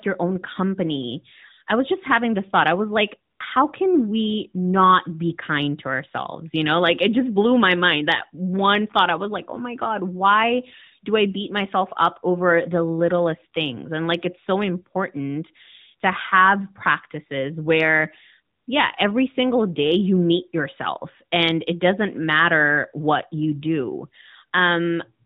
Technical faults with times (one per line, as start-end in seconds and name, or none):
none